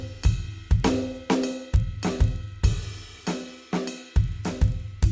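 Throughout the music there's a 25 Hz buzz from a resampler restarted on every block: each 40 ms chunk was converted from 44.1 kHz to 16 kHz in isolation, leaving small errors at every edge.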